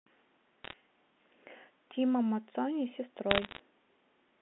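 Bit errors on a digital phone line crackle through the speech at 0.64–0.73 s and again at 3.31–3.59 s. Flipped bits, around half a percent, corrupt single samples, showing as isolated waveform spikes and thin vertical spectrogram streaks.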